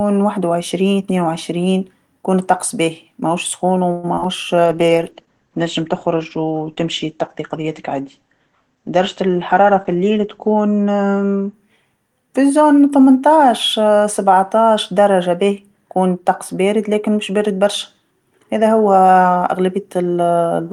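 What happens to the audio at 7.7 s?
A call bitrate drop spans 4.66 to 11.59 s. The starved encoder codes coarsely and cuts everything above 8 kHz, so the speech sounds muffled and watery.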